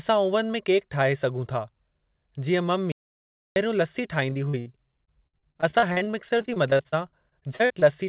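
At 2.92 s the speech just stops dead, and for about 0.64 s until 3.56 s there's pure digital silence with not even room tone underneath. That's an audio dropout to silence, likely the input going missing while the recorder kept writing silence, so whatever was said there is gone.

Then comes repeated packet loss with the classic robotic sound. From 4.30 to 4.68 s there are four quick holes, the longest about 64 ms, covering roughly a third of that stretch. From 5.06 to 7.83 s it's worse in duration, with 26 gaps, none longer than about 55 ms, concealing around a quarter of the audio. Each hole gets papered over by stretching the last bit of sound, so it comes out choppy. All of this sits on a call-style path with nothing above 4 kHz, which fits a G.711 codec.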